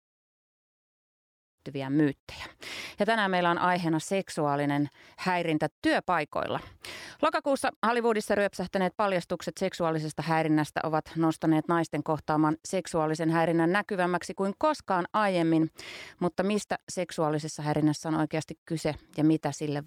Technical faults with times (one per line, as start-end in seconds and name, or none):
none